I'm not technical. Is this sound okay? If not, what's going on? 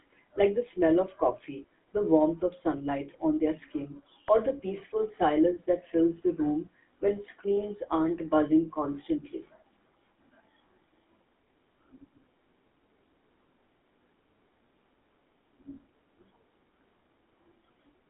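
No. Throughout, the speech has gone through the GSM full-rate codec, early mobile-phone coding that adds a buzzy, gravelly roughness and drops everything above 3.5 kHz.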